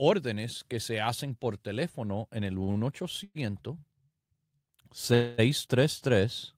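Just after "por teléfono en el", two short stalls from a late packet, at 2.63–2.70 s and 2.72–2.78 s: the jitter buffer briefly ran dry, so the last sound is held for roughly 40 ms with a faint buzz, then resumes exactly where it stopped, nothing lost.

At 3.24–3.37 s and 5.14–5.40 s come longer call audio freezes, likely from packets held up in transit. Unlike the stalls, the sound is drawn out into a fading buzz, 115 ms ending in about 30 ms of silence, then 242 ms with no silence, before continuing intact.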